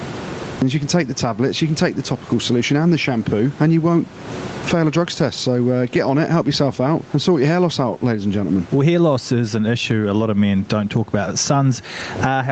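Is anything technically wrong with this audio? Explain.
Yes, two things stand out.

Gain pumping runs the whole way through. The gain is pulled down on each loud sound, squashing loud and soft parts closer in level, swinging roughly 20 dB, likely from a fast limiter fighting very high mic gain.

Cut-off start: the first 0.62 s is pure digital silence. Then the speech jumps in mid-sound with no natural attack, because the recording began late.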